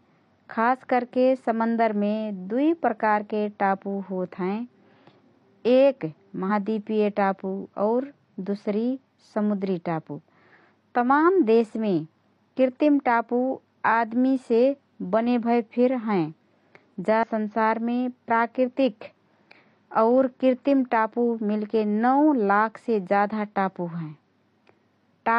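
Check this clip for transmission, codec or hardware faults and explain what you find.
Three short bursts of damaged data in a compressed stream, at 6.46–6.50 s, 10.13–10.19 s and 17.23–17.28 s. Corrupted bytes make the decoder misread frames and resynchronise, giving brief chirps, squawks, clicks or short holes in the speech, seen as sharp broadband smears on a spectrogram and abrupt waveform discontinuities.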